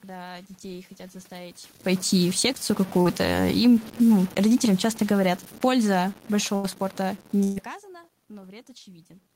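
Speech runs through the whole clip with a grainy, rasping texture that rises and falls with the sound. Quiet passages turn gritty instead of smooth, with the error only around 25 dB below the signal. This is likely low bit depth without dither, consistent with about 6-bit truncation, so the rounding error tracks the waveform rather than sitting as steady hiss. From 2.13 s to 7.74 s the level sinks steadily by about 9 dB, with the background dropping along with it. That is automatic gain falling: the gain control judged the input too loud or its background noise too strong and eased its gain down gradually. At 3.01 to 3.07 s there is a brief smear where about 40 ms went missing. This short concealed packet loss was bridged by extending the preceding sound before blending back into the real audio. At 6.55 to 6.65 s, and again at 7.43 to 7.58 s, the sound holds as a fading buzz or hiss and then jumps ahead. 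These are bursts of packet loss of about 80 ms and 120 ms, and the audio inside each gap is simply lost.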